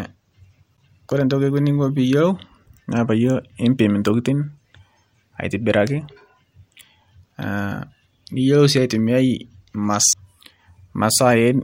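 At 0.77 s there's a CD skip: a brief tick and a dropout of roughly ten milliseconds, after which the speech picks up from a different point, as if the laser got knocked onto another turn of the disc's spiral and the player muted while it found its place again. The same thing happens at 10.13 s, with an even shorter mute of just a few milliseconds before the audio resumes somewhere else.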